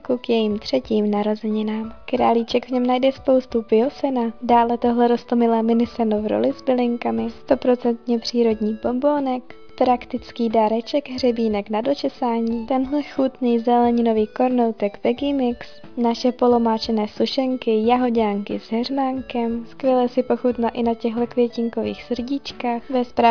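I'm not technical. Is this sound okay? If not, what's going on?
Yes, nothing in this recording points to a technical problem with how the sound was captured or carried.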